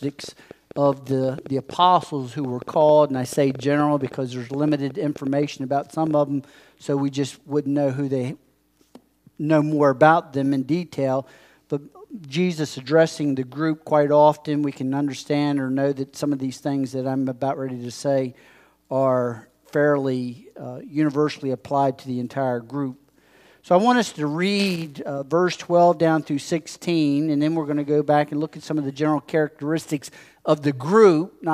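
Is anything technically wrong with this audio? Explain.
Yes. From 0.03 to 6.12 s, a train of clicks pops unevenly at 6.9 per second, roughly as loud as the sound, likely from interference injecting pulses.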